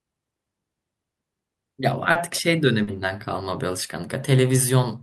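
Brief smears break the speech at 2.11 s and again at 2.83 s. Both are short concealed packet loss: about 40 ms of audio arrived too late each time, and the receiver patched each gap by extending the preceding sound before blending back.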